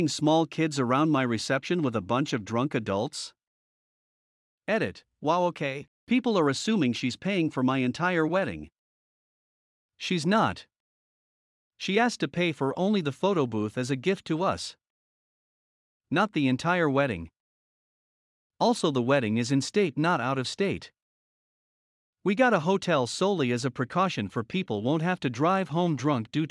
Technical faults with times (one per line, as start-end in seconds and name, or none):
none